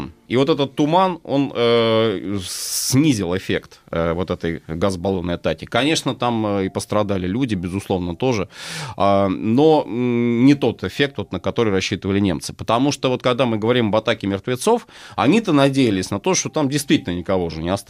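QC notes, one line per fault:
QC notes: no fault found.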